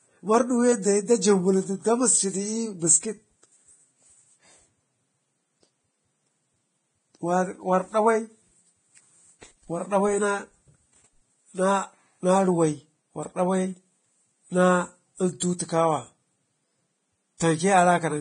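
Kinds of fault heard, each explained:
Vorbis compression: The speech sounds hissy and grainy throughout, with nothing above 9.7 kHz and treble detail turned to noise, likely from heavy Vorbis coding near 22 kbps. Unlike plain low-pass filtering, the remaining highs sound roughened rather than simply dull.
pre-echo: A short hiss about 17 ms long comes just before sharp attacks at 15.40 s and 15.58 s, as coding noise spread across each block spills into the quiet moment before the onset. Unlike a click, it is a short wash of noise leading into the attack.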